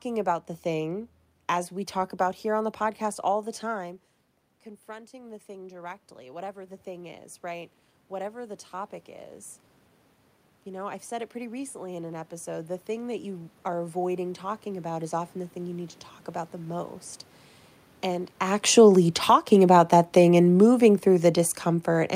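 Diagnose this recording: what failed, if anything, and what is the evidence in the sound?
Automatic gain rising, in the call-processing stage: after the talker moves away around three and a half seconds, the input drops by about 16 dB. From 4.85 to 9.01 s the gain climbs about 8 dB, and again from 10.64 to 16.96 s by about 7 dB. Voice and room noise swell together, so the waveform envelope and the spectrogram's noise floor ramp up in step.

Automatic gain falling, also in call processing: from 18.54 s to the end at 22 s, just after the talker moves, the level sinks with its background. The envelope tapers and the spectrogram's floor darkens alongside the voice.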